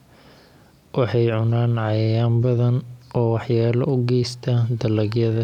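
Nothing stood out as a technical fault on listening to the speech.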